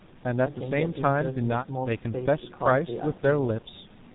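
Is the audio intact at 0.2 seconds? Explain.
No. At 0.2 seconds the speech is already passing through the G.723.1 codec, which spans the whole clip. Encoding in 30 ms frames at a rate that fits about 6 kbit/s discards everything above 4 kHz and tracks the voice slowly, so the speech sounds heavily muffled and hoarse, with smeared consonants.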